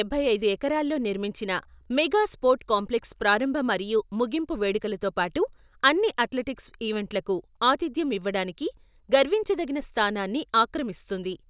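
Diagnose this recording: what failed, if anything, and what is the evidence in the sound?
Nothing failed in this recording.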